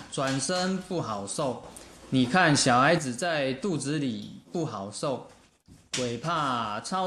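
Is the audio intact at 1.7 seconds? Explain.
No. From 1.64 to 2.98 s there is a sudden gain jump, likely from a digital gain step applied between one sample and the next with no ramp. The sound and its background noise leap up together by about 7 dB, then drop back.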